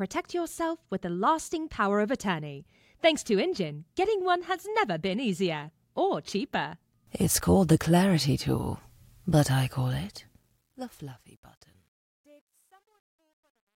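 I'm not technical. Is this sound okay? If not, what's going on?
No, not quite. From about 9.80 s to the end at 13.76 s, the sound fades out, and that fade has truncation distortion on a fade. The volume stage keeps too little detail to follow the level down cleanly, so the quiet part turns grainy. From around 11.27 s onward it's at its worst, gritty instead of just trailing away. The coarseness fits a stage holding only about 11 bits.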